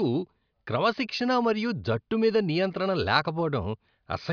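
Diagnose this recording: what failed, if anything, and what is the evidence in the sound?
Nothing in the speech points to a failure at any stage of the chain; the signal stays continuous and intact throughout.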